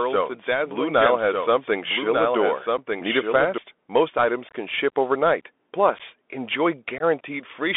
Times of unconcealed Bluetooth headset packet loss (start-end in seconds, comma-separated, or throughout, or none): 2.77, 4.49-4.55, 5.99-6.01, 6.98-7.02